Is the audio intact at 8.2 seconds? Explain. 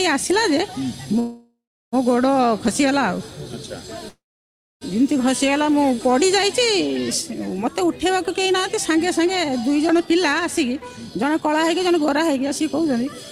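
No. At 8.2 seconds the audio is inside a jitter buffer speed-up lasting from 8.09 to 9.26 s. The receiver had built up excess delay. It trimmed short pitch-period slices repeatedly, cutting about a tenth of a second. The sound runs at 107% speed, same pitch, hurried.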